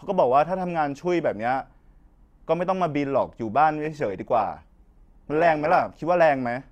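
Speech clip with an adaptive stream at a lower bitrate from 3.85 to 5.85 s. Codec artefacts rise abruptly, without a gap, which fits a drop from 64 to 16 kbit/s Opus.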